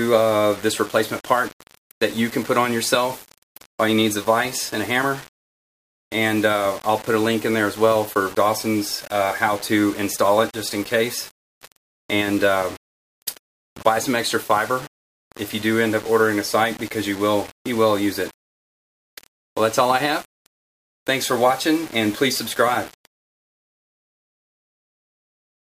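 Low bit depth without dither runs through the whole clip, from start to finish. The audio carries a grainy, signal-dependent distortion sitting around 20 dB below the sound itself. The likely cause is that the samples were rounded to a coarse grid, which fits about 6 bits, with no dither added first. Because the rounding error tracks the waveform rather than spreading as neutral noise, it is heard as grit riding on the sound.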